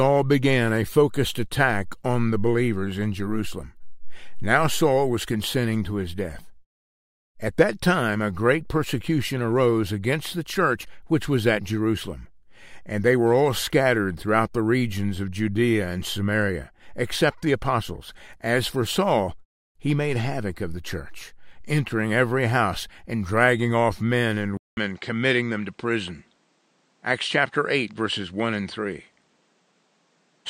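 At 24.57 s there's a gap of about 200 ms, and from there to the end the sound loses its top, with nothing above 9.5 kHz and a faint new noise floor, though the level holds steady. That's most likely the input switching to a poorer device.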